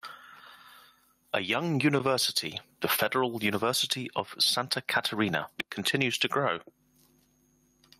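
A short speech recording with gain pumping all the way through: the level is pulled down on each loud bit, swinging roughly 15 dB, likely from the input gain being set far too hot with a fast limiter clamping down.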